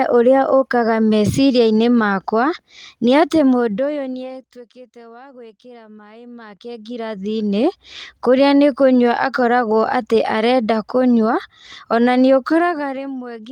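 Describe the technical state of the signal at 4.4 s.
Zipper noise, 3.46 to 4.69 s: the level falls by roughly 25 dB in unsmoothed steps, about fifty a second, each step clicking into an audible zipping tick.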